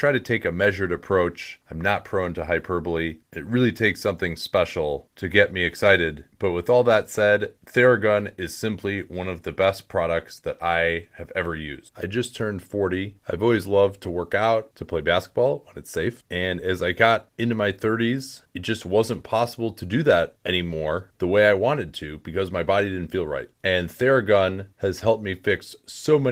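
Nothing goes wrong anywhere in this speech, which comes through Opus voice compression with just the light touch of coding you'd expect from it and no fault to point to.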